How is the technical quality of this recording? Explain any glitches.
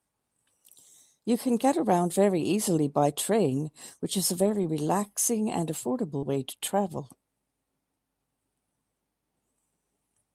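The recording has two kinds of packet-loss damage, both in the middle of the speech.

From 4.45 to 4.63 s there is a lost packet rebuilt from error correction. Each missing packet was replaced by the low-bitrate copy carried in the following one, so there is no gap, only a rougher, noisier stretch. The roughly 100 ms of rebuilt audio fits five lost 20 ms packets.

From 6.17 to 6.24 s there is a short concealed packet loss. About 40 ms arrived too late, and the decoder extended the preceding sound across the hole before blending back into real audio. It comes across as a brief smear. At 6.22 to 6.24 s a further 20 ms was rebuilt from error correction, rougher and noisier.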